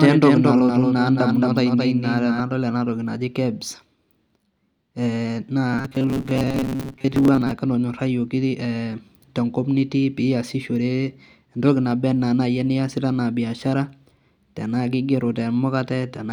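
From the start until 2.4 s, before "enatoki naji", a doubled audio track: a dry copy about 5 dB quieter trails by about a fifth of a second, likely from a second, slower capture path. From 5.73 to 7.51 s, robotic sound from repeated short buffers: a metallic 134 Hz buzz, likely from repeating roughly 7.5 ms buffers, with about half the audio skipped.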